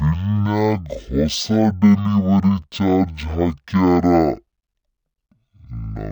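From start to finish the speech runs at half speed and an octave low, the signature of stereo read as mono: interleaved left and right samples were taken as one channel. A spectrogram shows stretched, lowered harmonics, plus a fainter mirrored copy filling the upper half.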